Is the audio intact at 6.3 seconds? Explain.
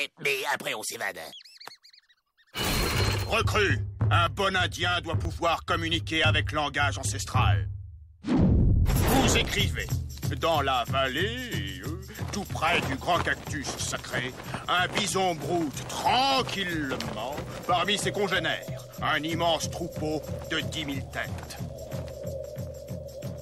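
No. Just before that point, from 6.24 to 6.27 s, there is an overlap between stream segments: the time stamps of two neighbouring segments claimed the same stretch, and the player discarded the overlapping portion even though that sound had not actually been duplicated. About 30 ms of audio is missing, so the waveform jumps straight from one point to a later one, and this is heard as a brief click or tiny skip in the sound.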